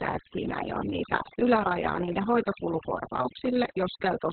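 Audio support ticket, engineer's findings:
Overdone noise removal, throughout. Background pulled down and broken into twinkling specks; quiet parts of the speech drop out with it. Noise suppressor set too aggressive: bands near its noise estimate are cut hard or gated off, including low-level speech energy.

Opus voice compression, throughout. Speech muffled, hoarse, slightly robotic; nothing above 4.3 kHz. Heavy coding damage consistent with narrowband SILK mode at about 6 kbps with long frames, around 60 ms. At that rate the codec narrows the band and quantises the excitation coarsely.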